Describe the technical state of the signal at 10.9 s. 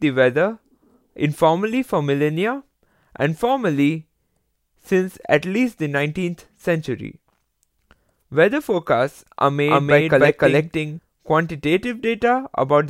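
At 10.9 s the signal carries a doubled audio track. It runs from 9.67 s to 10.99 s. A second full-band copy of the speech trails the original by roughly a third of a second. It is about as loud as the original. It has no decay and no room colour. It ends abruptly at 10.99 s. The likely cause is the same audio being captured twice, with one copy arriving through a slower path.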